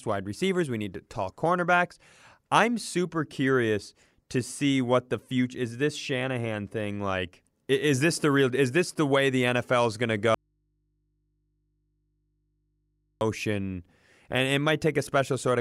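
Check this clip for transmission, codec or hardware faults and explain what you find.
One fault is present in this speech clip: an audio dropout to a faint residue. From 10.34 s to 13.21 s, right after "is going to", the speech cuts off abruptly and is absent for about 2.9 s. The gap is not silent; it holds mains hum roughly 50 dB below the speech level before the signal snaps back. The likely cause is a brief loss of the source feeding a path that stayed live, leaving an open input to pick up hum.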